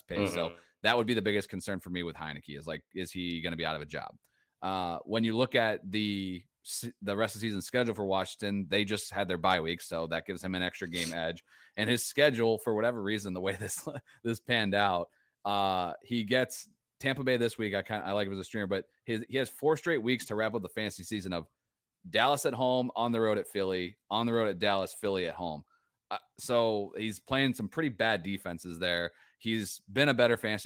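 Nothing technically wrong turns up in this speech recording; it's just ordinary Opus-coded voice doing its job, with nothing standing out at any point.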